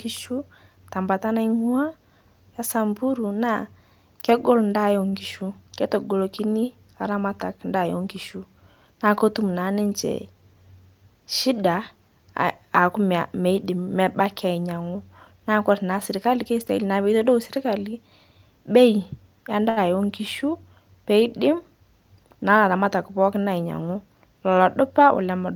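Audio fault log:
5.09–5.14 s and 19.69–19.79 s, short stall from a late packet: a packet arrived late and the jitter buffer ran dry, so the receiver held the last sound for 31 ms and then 71 ms. Playback resumed from the same point, so nothing is lost, but the speech briefly drags with a slight buzz or dip.
10.04–10.55 s and 22.49–22.87 s, jitter buffer speed-up: the buffer held more than its target. The receiver trimmed pitch-period-sized slices repeatedly, removing about 40 ms and then about 50 ms. This made the speech run at 106% and then 112% speed at unchanged pitch, so it sounds hurried.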